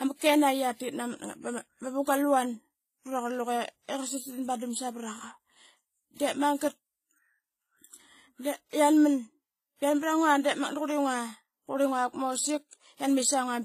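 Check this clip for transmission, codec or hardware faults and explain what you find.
The speech carries a codec fault that runs through the whole clip. It sounds like transcoding between lossy codecs, likely a WMA-style encode at a moderate rate followed by a low-rate HE-AAC encode. Nothing is present above 14.9 kHz, the lowest cut-off in the chain. Two kinds of damage sit together. There is a coarse, smeared texture from the first codec. On top of that come the swirly, synthetic highs typical of HE-AAC at about 20 kbit/s. The second codec wastes bits re-encoding the first codec's errors.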